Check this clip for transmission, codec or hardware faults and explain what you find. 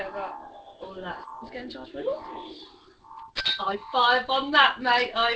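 Two kinds of transmission fault are present: one skip ahead and two stretches of jitter buffer speed-up.

At 1.24 s, a skip ahead: about a second of audio was dropped, so playback jumps forward abruptly with no gap between the joined sides.

From 1.49 to 2.07 s and again from 2.51 to 5.22 s there is jitter buffer speed-up. The overfilled buffer trimmed pitch-period-length pieces repeatedly, roughly 40 ms in the first stretch and about 400 ms in the second. Playback runs at 105% and then 116% with pitch unchanged, and the second stretch sounds noticeably hurried.

The audio carries no content above 8 kHz, which fits the G.722 wideband codec on the call path.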